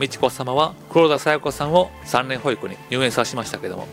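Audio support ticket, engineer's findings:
Resampler restarted on every block, 0.0 to 2.1 s. Regular ticks at 10 Hz, present only with signal. Points to 48 kHz to 44.1 kHz conversion run on isolated 100 ms blocks, with edge samples missing context and leaving a small error at each boundary.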